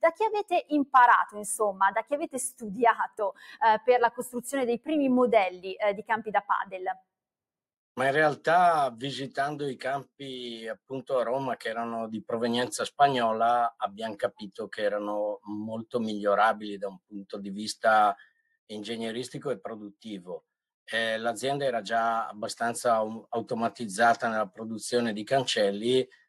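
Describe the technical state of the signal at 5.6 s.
A speech-tuned noise suppressor is running on the whole signal, treating held, steady sound as noise. Its gain swings by about 5 dB, so at 5.6 s sustained parts are already being pulled down while attacks pass, giving a pumping, thinned character.

Between 5.50 and 5.66 s the noise suppressor cut this particular sound much harder than its surroundings, with the deepest drop about 15 dB over roughly 150 ms. The sustained body sinks or its decay is clipped short, while sudden onsets mostly come through.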